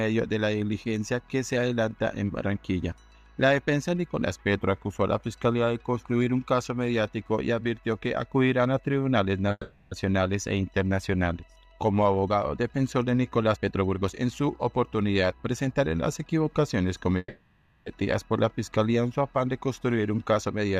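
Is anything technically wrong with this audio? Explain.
Yes, there are two kinds of fault, each occurring twice.

Call audio freeze, at 9.51–9.92 s and 17.18–17.87 s: the last sound is drawn out into a fading buzz, with a brief near-silence, for about 0.4 s and then 0.68 s, before resuming with nothing skipped. Delayed packets likely emptied the jitter buffer, so the receiver filled the wait, adding a gap.

Jitter buffer speed-up, at 13.55–15.69 s and 19.83–20.65 s: the sound hurries at unchanged pitch, running at 118% and then 109% speed. After a backlog built up, the receiver trimmed many short pitch-period slices to shrink the delay, removing roughly 0.4 s and then a small fraction of a second.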